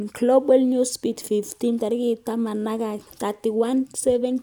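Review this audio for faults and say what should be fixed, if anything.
Nothing here needs fixing, since no faults turn up anywhere in the recording.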